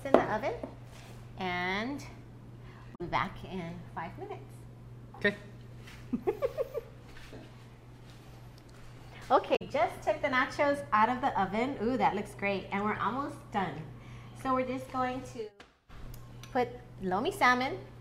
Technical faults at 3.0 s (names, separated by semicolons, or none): damaged data in a compressed stream